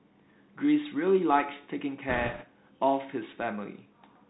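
From the start and through the whole clip, the speech carries the coloration of a Bluetooth CVSD headset codec, consistent with a 64 kbps CVSD stream. Each sample is coded as a single up-or-down bit with an adaptive step, and the band stops near 4 kHz, so the speech is narrow and dull. Fast, loud high-frequency energy outruns the step size and smears into distortion, sibilants come out scratchy, and a grainy hiss sits underneath throughout.

From 2.09 s to 2.45 s there are bit errors on a Bluetooth voice link, at a rate of a few percent. Flipped bits each nudge the reconstructed waveform slightly the wrong way, and the adaptive decoder lets each error fade rather than jump, so no sharp clicks appear. The damage instead sounds like a burst of rushing, crackling noise laid over the speech for about a third of a second, after which the codec's steady hiss returns.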